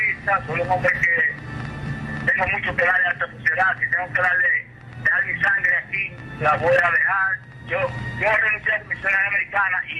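No technical faults are audible.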